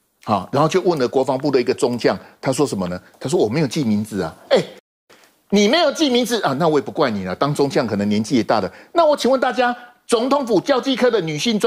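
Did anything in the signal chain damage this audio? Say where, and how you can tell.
Yes, a playback stall: sound cuts out from 4.79 to 5.10 s, leaving a flat waveform and blank spectrogram column, likely from the player's buffer running dry.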